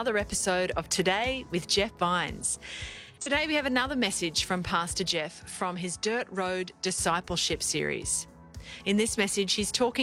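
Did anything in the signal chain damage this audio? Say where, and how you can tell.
Yes. Codec stage: AAC frame loss with concealment from 2.91 to 3.32 s leaves smeared, noisy patches, not the clean gaps of buffer dropouts.

Input stage: from 5.13 to 6.98 s, nothing above 11.4 kHz, level drops about 5 dB, new noise appears. This is likely an input switched to a poorer device, not codec low-pass.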